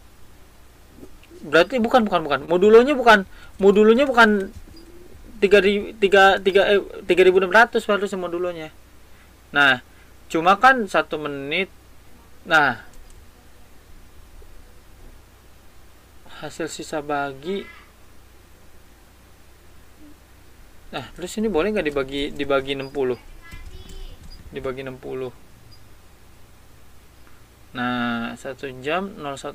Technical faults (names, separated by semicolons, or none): short concealed packet loss